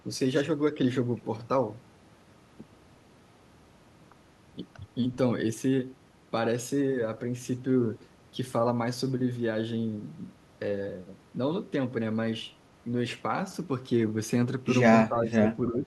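At 15.09 to 15.45 s and again from 15.71 s to the end, the speech dips by roughly 10 dB, likely speech suppressed in double talk, with the echo canceller ducking it.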